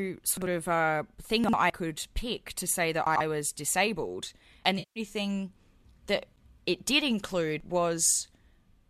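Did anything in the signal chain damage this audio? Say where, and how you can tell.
Yes. Chunks out of order at 0.37–0.46 s, 1.44–1.53 s and 3.07–3.20 s, in the driver or buffer stage. Each spot sounds briefly jumbled as a block of about 46 ms plays late, by one block twice and by two blocks at 3.07 s.

Audio missing between chunks at 1.70 s and 4.65 s, as an abrupt skip of roughly a twentieth of a second with a hard splice and no gap. The spacing points to a recorder that likely writes in 3-second chunks and drops a sliver at each handover.

AAC frame loss with concealment at 4.79–5.00 s, from the network or transport ahead of the decoder. For about 170 ms the sound turns smeared, noisy and phasey as the decoder rebuilds the missing frames from the last good spectrum instead of real data.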